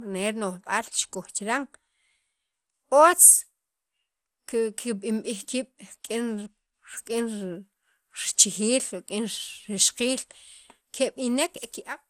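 Throughout, the speech sounds swirly, hollow and smeared, with blurred attacks and nothing above 16.6 kHz. That is worse than one encode, so likely generation loss from about seven MP2-like passes.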